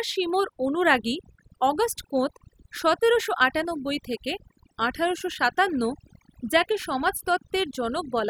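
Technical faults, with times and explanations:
Throughout, overdone noise removal: the background drops and breaks up into twinkling, warbling specks, while the speech has its softer edges and quiet tails eaten away. A noise reduction stage set far too aggressively is pulling individual frequency bands down or off wherever they sit close to its noise estimate, so low-level parts of the speech are removed along with the noise and isolated bands flicker on and off.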